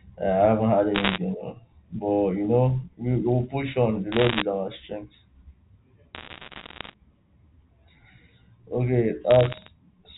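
Bit errors on a digital phone line crackle through the G.711 speech at 0.95–1.18 s, 4.12–4.42 s (just before "our strength"), 6.15–6.94 s and 9.31–9.68 s. Flipped bits corrupt single samples, giving sharp ticks that show as isolated waveform spikes and thin vertical spectrogram lines. The last burst is sparser.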